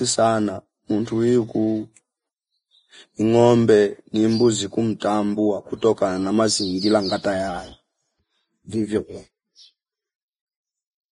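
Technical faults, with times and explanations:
throughout: Vorbis compression. The encoder appears to have run at very low quality, which fits a bitrate in the low twenties of kbps. This is likely the cause of the damage. It removed everything above 10.6 kHz and quantised the remaining treble so coarsely that fine detail became noise of similar energy. The speech therefore sounds heavily hissy and grainy. Tones are roughened, and consonant onsets are blurred.
5.00–5.02 s: pre-echo. Between "ngombe ni mbuzi" and "kutokana na mazingira ngata", a sharp onset fell late in a transform block. The codec spread that block's quantisation noise evenly, so noise sized for the loud attack also filled the quiet moment before it. The result is a short hiss about 21 ms ahead of the onset, which itself sounds softened and smeared rather than crisp.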